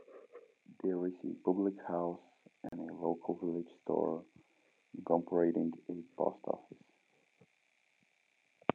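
Two separately encoded pieces of this speech were joined without trimming the encoder delay and final-frame padding, leaving a gap at a join of encoded pieces: after "is a public house", about 38 ms of silence opens from 2.69 to 2.72 s, with smeared edges, before "a local village store" continues.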